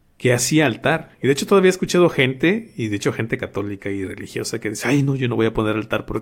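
Speech with no audible faults.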